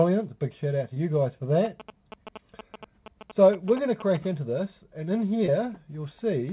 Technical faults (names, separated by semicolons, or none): short concealed packet loss; GSM signalling bursts